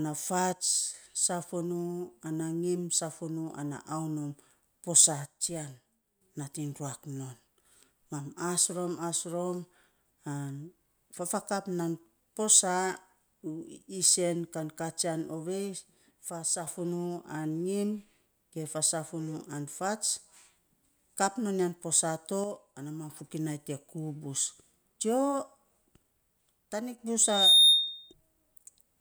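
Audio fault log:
0.53–0.94 s, 5.26–6.21 s, 16.31–16.67 s, 22.44–23.10 s (between "ya posaa to" and "fokinai te kuu bus") and 26.73–26.99 s, one channel drops out: the speech abruptly sinks by about 6 dB and then springs back. The likely cause is a stereo channel briefly going silent, so the mono sum keeps only half the shared signal.
27.21–28.13 s, loudspeaker feedback squeal: a steady 3.7 kHz tone rises out of the speech within about a third of a second and rings at roughly 15 dB above it before stopping. A microphone is picking up the loudspeaker it feeds, and at this one frequency the loop gain exceeds one, so the tone keeps building on itself until the amplifier limits it or the loop is broken.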